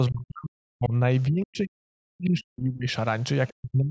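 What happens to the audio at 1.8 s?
The echo canceller likely mistook the talker for loudspeaker echo while both sides spoke, causing speech suppressed in double talk from 1.29 to 2.9 s. Around 1.8 s the speech is pulled down by as much as about 40 dB, nearly to silence.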